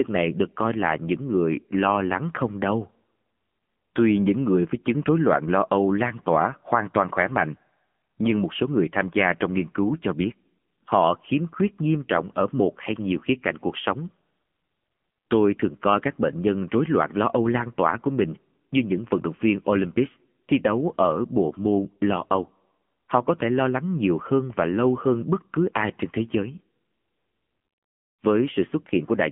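Speech with AMR narrowband mobile codec damage throughout, buzzy and synthetic, which fits a 7.95 kbps mode; a spectrogram shows nothing above 3.5 kHz.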